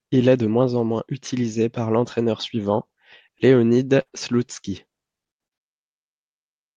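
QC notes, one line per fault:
3.27–4.5 s, repeated packet loss (robotic sound): five short dropouts, longest 51 ms, patched by repeating prior sound; spectrogram shows smeared, stretched harmonics and repeated waveform cycles.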